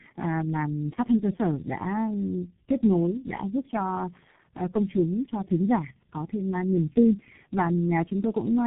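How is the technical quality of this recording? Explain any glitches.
The quality is poor. Tandem speech coding runs throughout: the speech sounds like it was decoded and re-encoded across about four speech codecs in a row, which fits low-rate coders such as G.723.1 and G.729A. Each pass compounds the last, leaving it rough, muffled and warbly, with nothing above 3.8 kHz.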